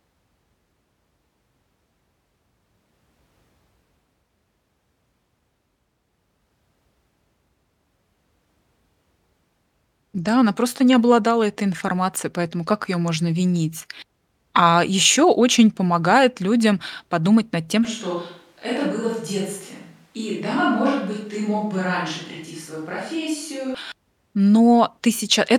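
At 17.85 s, right after "людям подумать над тем", the speech abruptly turns roomy and hollow, thinner in the bass and about 5 dB quieter, with more room noise sitting roughly 35 dB below the speech. At 23.75 s it snaps back just as suddenly. This is a switch to a distant microphone, likely because the close microphone's signal dropped out and a mic farther from the talker, picking up more of the room, filled in.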